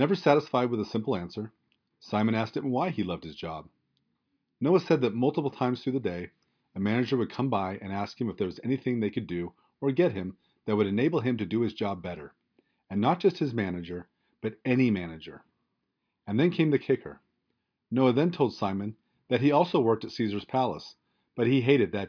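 No audible technical faults.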